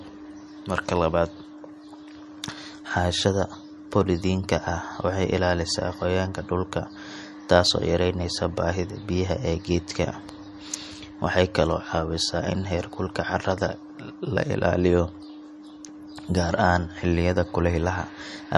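MP3 compression throughout: the speech stops dead above 12.1 kHz and swirls audibly as weak components flicker, likely a bit-starved MP3 encode fitting about 44 kbps.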